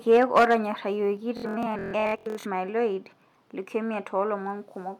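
Microphone overload runs from 0.11 to 0.55 s at the start of this speech recording. The loudest peaks push about 8 dB beyond the converter's ceiling and are flattened at the top, roughly one sample in twenty, which gives those syllables a harsh, crackly edge. The likely cause is an input level set too high, so the waveform hits the converter's limit. Microphone volume stepped down is heard twice: at 0.17 s, right inside that distorted stretch, voice and background together sink by about 2 dB in one step, and at 1.17 s they drop again by about 3 dB. These sudden level changes are likely the call software reacting to the overload by cutting the device's input gain, which lowers everything at once instead of fading. Bluetooth stutter fills 1.37 to 2.46 s, where the speech turns into a buzzing, machine-gun repetition. When audio packets arrive late or not at all, the receiver keeps replaying its last short slice. 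Here about two-thirds of a second of audio is lost across that span of roughly 1.1 s, and the longest unbroken run of repeats lasts 0.14 s. After each gap the speech resumes further on, as though it had kept playing in the meantime.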